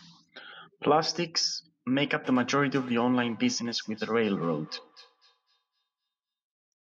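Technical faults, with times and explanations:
2.24–6.08 s, feedback echo between two devices: the speech returns at a steady interval of roughly a third of a second, at about 22 dB below the direct speech. A second device in the room plays back what this microphone sent, which this microphone picks up again, and the local echo canceller only removes its own playback. On a spectrogram, faint copies of each syllable trail at that spacing, with thinned low end and ringing bands. The waveform shows small repeated bursts after each phrase.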